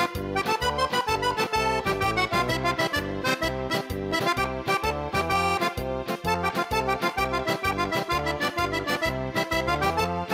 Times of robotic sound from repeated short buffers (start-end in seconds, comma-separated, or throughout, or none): none